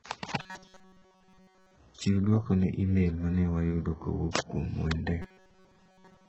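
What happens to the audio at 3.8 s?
At 3.8 s, as across the whole clip, the speech sounds gritty and lispy on s sounds, likely from HE-AAC compression at a very low bitrate near 8 kbps. The treble is copied up from lower bands, so a spectrogram shows smeared, repeated patterns above the crossover.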